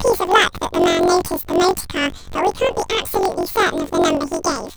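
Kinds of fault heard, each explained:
Planar audio read as interleaved: The speech has a robotic buzz near 46 Hz throughout. Each 21.8 ms block of separate left and right samples is read as alternating pairs, so each half plays at double speed, an octave up, blurred by the rapid block switching.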